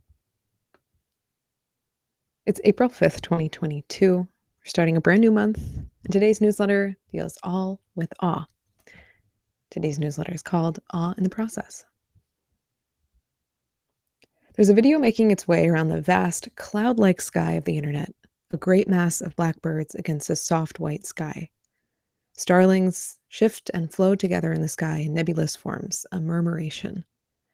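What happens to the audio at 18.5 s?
At about 18.51 s, a 20 ms stretch of the call failed to reach the decoder in time, giving a short concealed packet loss that runs to 18.55 s. The receiver covered roughly 19 ms of that hole by carrying the preceding sound forward, extending its pitch where it was voiced and substituting shaped noise where it was not, before blending back into real audio. It is heard as a very brief smear or wobble, and a short consonant there can drop out.

Overlapping the end of that span, from 18.53 to 18.55 s, is one lost packet rebuilt from error correction. The packet that followed carried a low-bitrate backup copy of the missing one, and the decoder played that copy for 20 ms instead of leaving a gap. Because the copy was encoded coarsely, this short piece sounds rougher and noisier than the audio around it, a small grainy patch just as the concealment hands back to the normal signal.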